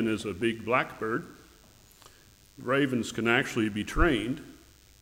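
From start to finish a DECT cordless phone buzz sits under the sound: a thin, steady, rasping tone pitched at 100 Hz, roughly 35 dB below the main signal. A nearby DECT handset or base transmits a brief radio burst every 10 ms, and the audio circuitry rectifies those bursts into audible pulses. On a spectrogram it shows as a comb of evenly spaced horizontal lines at 100 Hz and its harmonics. The waveform carries a faint pulse train repeating every 10 ms.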